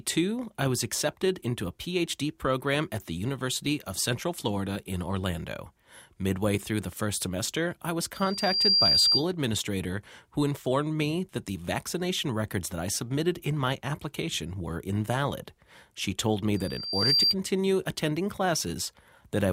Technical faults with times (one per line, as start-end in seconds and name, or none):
8.14-9.24 loudspeaker feedback squeal
16.56-17.35 loudspeaker feedback squeal